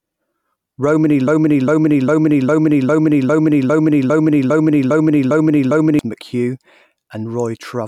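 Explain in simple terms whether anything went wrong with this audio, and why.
Something went wrong. From 1.28 to 5.99 seconds, the speech gets stuck in a broken-record loop. A piece about 0.40 seconds long plays 12 times in a row. The likely cause is a stalled player or stream resending its last fragment. The speech meant for that stretch is lost.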